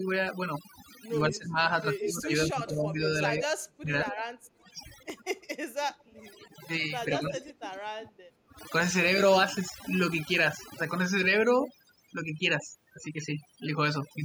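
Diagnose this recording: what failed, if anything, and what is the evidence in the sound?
Call processing applied overdone noise removal across the whole recording. Its suppressor pushes individual frequency bands down whenever they sit near its noise estimate, so the background drops and breaks up into twinkling specks.

Speech suppressed in double talk, likely from the echo canceller failing to tell near-end speech from loudspeaker echo, hits 1.28–4.13 s and 7.1–8.58 s. The voice dips by roughly 20 dB and 25 dB respectively, for about two seconds and one second in total.

Echo leak shows as a delayed copy of the voice trailing the original by 147–149 ms, consistent with residual loudspeaker pickup the canceller failed to remove. It appears at 1.99–2.09 s (about 5 dB below the speech), 4.08–4.21 s (about 20 dB), 5.88–6.48 s (about 30 dB) and 7.41–7.69 s (about 20 dB).

Between 4.41 and 6.24 s the echo canceller clamps the microphone while the far end plays, producing background gated by the echo canceller. 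Room sound drops by up to about 18 dB for roughly a second in total, then returns when the canceller releases.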